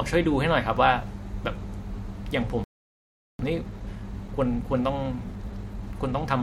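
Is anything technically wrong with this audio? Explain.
Yes, two linked problems. At 2.64 s the speech cuts out for about 0.75 s until 3.39 s, a playback stall, likely the player starving for data or its thread getting blocked. Then from 3.39 s to 6.39 s there's time-compressed catch-up: the player trims its backlog by splicing out small chunks, so the speech runs at roughly 1.1 times speed with unchanged pitch.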